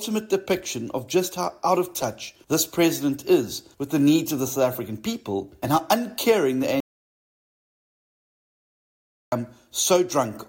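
An audio dropout to silence runs from 6.80 to 9.32 s: the input was likely cut off while recording continued, leaving 2.5 s of silence with no room tone.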